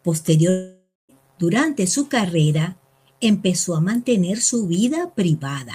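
A long network dropout runs from 0.49 to 1.12 s. The speech turns into a fading buzz and then silence, likely because 0.6 s of audio never arrived.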